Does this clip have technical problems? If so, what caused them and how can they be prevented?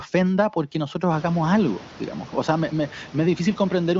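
No, the speech comes through intact over what sounds like a wideband HD Voice (AMR-WB) link with nothing above about 7.5 kHz, and the room background that swells by about 25 dB around the 1 s mark stays roughly 20 dB below the voice as part of the recording itself.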